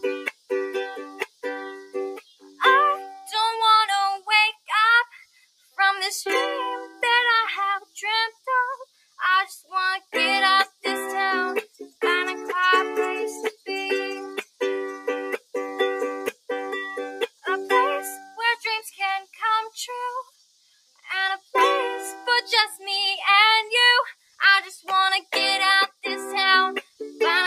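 From the start, a noise suppressor applied to music or sounds is working on this clip. It treats sustained, steady material as background noise and pulls it down, while sudden onsets get through. The level therefore moves up and down by around 20 dB with the character of the sound rather than with its loudness. This separates it from an ordinary compressor or limiter, which would react to level, not to whether a sound is sustained or sudden.

The stretches where sound is cut by the noise suppressor fall between 0.0 and 5.78 s, 6.89 and 12.02 s, 13.51 and 22.82 s, and 24.12 and 27.0 s. Within each, held or fading parts sink by up to about 21 dB in the first stretch and about 20 dB in the others, and decays end early. The affected portions add up to around three, two, three and one second respectively. Unlike a dropout, steady and fading sound is turned down while sudden sounds mostly come through.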